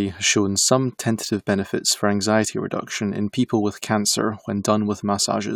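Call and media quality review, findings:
No faults found in the signal path for this speech recording, and nothing in the capture, transmission or playback chain calls for a ticket.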